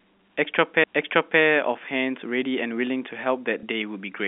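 At 0.84 s there is a CD skip. The laser jumped to another turn of the disc spiral, so the player muted very briefly and resumed from a different point. It sounds like a tick and a jolt in the speech. A waveform shows a tiny gap and a mismatched join.

From 3.60 to 3.63 s there is packet loss with the last packet repeated. For 30 ms, which fits a single lost packet, the receiver replayed the previous packet. The repeat gives a small blip. A spectrogram shows a smeared, duplicated frame, all within the G.711 telephone band of roughly 150 Hz to 3.6 kHz.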